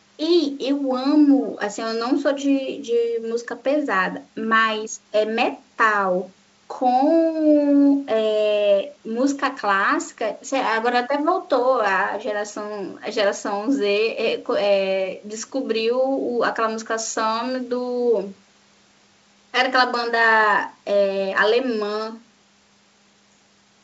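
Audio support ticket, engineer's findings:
Nothing to flag on this one: the speech comes over the G.722 wideband link at 64 kbit/s with its usual reach up to about 7 kHz, and any coding hiss in the top band is faint at most.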